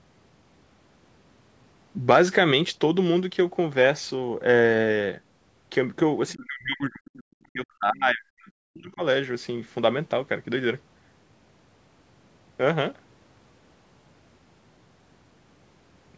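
From 6.32 to 9.02 s, the speech sinks sharply and breaks into fragments. The deepest dips fall by around 40 dB, close to silence. The pattern points to speech suppressed in double talk, likely from an echo canceller during a stretch where both ends spoke at once. Unable to tell the near talker from the loudspeaker echo, it turned everything down. Across roughly three seconds the speech fades, thins and drops out, inside the call path's 8 kHz band limit.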